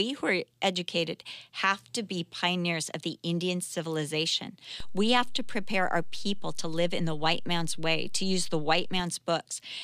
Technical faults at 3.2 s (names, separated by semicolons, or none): none